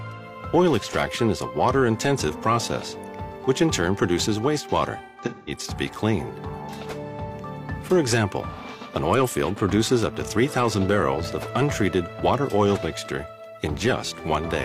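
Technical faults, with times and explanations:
5.04 to 5.51 s, AAC frame loss with concealment: there's a smeared, noisy patch where around 0.3 s of audio goes missing in bits scattered over about 0.43 s, the longest gap roughly 150 ms. The decoder rebuilds each gap from the last good spectrum, so it turns phasey, which fits about seven dropped frames.
8.54 to 8.61 s, AAC frame loss with concealment: a quick 43 ms smudge, consistent with a single lost frame patched over.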